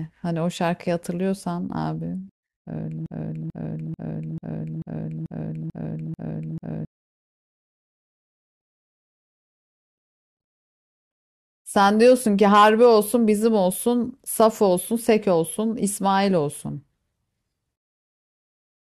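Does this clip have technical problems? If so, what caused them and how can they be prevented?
Yes. From 3.06 s to 6.85 s the speech falls into a broken-record loop. A fragment of about 440 ms repeats back to back, nine times over, with no gap between copies. The likely cause is a stall in the player, encoder or stream, which kept resending the last piece it held. Whatever should have been heard in those seconds is gone. Larger buffers, stall detection that outputs silence rather than repeats, and a stable stream would prevent it.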